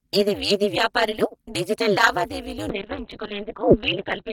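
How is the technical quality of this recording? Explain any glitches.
The technical quality is poor, with two faults affecting the speech.

Overlap-add ripple runs throughout. The frames were recombined with an overlap that doesn't sum to constant gain, so the level swings by about 60 dB at around 200 Hz. This sounds like a metallic buzz with extra tones around the voice.

A call bitrate drop begins at 2.7 s and lasts to the end. The muffled, watery sound suggests the encoder fell from roughly 32 to 6 kbps. Bandwidth narrows from 20 kHz to 4 kHz, and the sound is at its coarsest for about 1.1 s.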